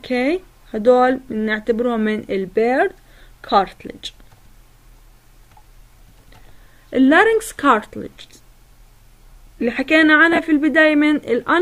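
At 3.18 to 3.20 s the sound briefly turns into a grainy, noisy smear, and at 10.32 to 10.39 s it happens again as short smeared gaps scattered over about 60 ms. These are lost LE Audio frames. About 15 ms went missing the first time, consistent with two 7.5 ms frames, and about 30 ms the second time, in short runs. The LC3 decoder covered each gap by replaying the last spectrum with randomised signs, which breaks up any tone into noise.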